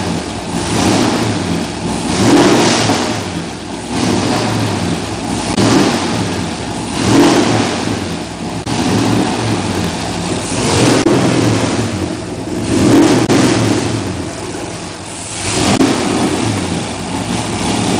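A steady buzz at 43.1 Hz runs under the whole audio. The sound plays slightly slow, at 0.938 times normal speed, while its pitch stays about where it should be. This is a block size mismatch (padded). One stage hands over blocks shorter than the 1024 samples the next stage reads, and the remainder of each block is filled with zeros, which fits writes of roughly 960 samples. On a waveform every block ends in a short flat gap. On a spectrogram the gaps appear as thin vertical stripes at regular intervals, with a comb of harmonics at multiples of 43.1 Hz.

Separately, five brief chirps or blips occur, each lasting about 75 ms, at 5.51 to 5.58 s, 8.60 to 8.67 s, 10.99 to 11.07 s, 13.22 to 13.30 s and 15.73 to 15.80 s. These are damaged data in a compressed stream. Corrupted bytes make the decoder misread those frames, lose sync and hunt for the next valid header. On a spectrogram each event is a short smear of broadband or oddly banded energy, and the waveform shows a discontinuity at both edges.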